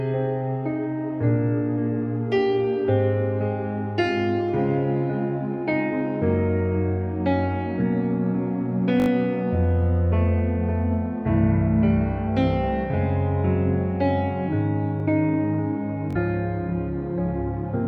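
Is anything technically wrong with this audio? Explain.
Yes, there are two kinds of dropout. A repeated buffer at 9.00 to 9.08 s and 15.00 to 15.02 s: audio arrived late, so a 20 ms slice replays, four extra times then once, as a quick buzz or tick. A Bluetooth stutter at 16.11 to 16.17 s: late packets force a brief repeat, then the sound jumps ahead about 43 ms, which fits a couple of dropped frames.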